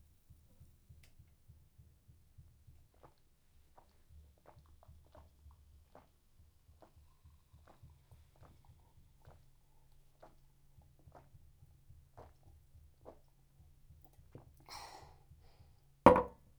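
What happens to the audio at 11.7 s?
At 11.7 s you're hearing the same wrong sample rate problem that runs through the whole clip. Everything plays about 1.38 times too fast, and the pitch rises by about 5.5 semitones. Because nothing resamples the audio, speed and pitch climb together, so the sound comes across as squeezed, chirpier and rushed. That ratio fits material captured at 32 kHz being played straight out at 44.1 kHz.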